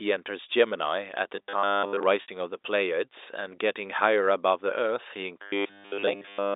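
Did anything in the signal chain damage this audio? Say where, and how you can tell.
Yes. Robotic sound from repeated short buffers appears at 1.37 to 2.03 s and again from 5.42 s to the end. The speech becomes a rigid, metallic buzz at 100 Hz. The likely cause is the driver or buffer stage starving and looping 10 ms blocks, with most of the real audio skipped.

Packet loss with pitch repetition hits the network stage at 2.22 to 2.28 s. About 60 ms goes missing, which fits three 20 ms packets. The receiver bridges the gap by repeating the last pitch period and fading it out, which gives a brief held, buzzy tone before the speech returns. The G.711 telephone coding underneath keeps its 300 Hz to 3.7 kHz band.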